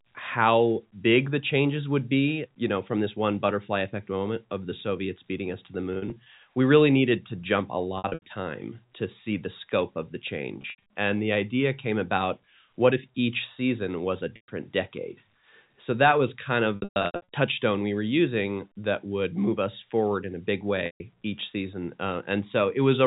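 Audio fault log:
5.94 to 21.00 s, packet loss with pitch repetition: six short gaps, at 5.94–6.26 s after "beating us to the" and before "we really needed to", 7.98–8.22 s, 10.62–10.77 s after "the scope of the", 14.36–14.48 s after "each season was a", 16.76–17.26 s, and 20.86–21.00 s. Each time, audio went missing and the last pitch cycle was looped to fill it. Brief holes come out as a held, buzzy tone. The worst, 16.76–17.26 s, loses 380 ms in runs of up to 120 ms, so the loop fades toward silence before the sound resumes. The narrow telephone band stays constant through these gaps.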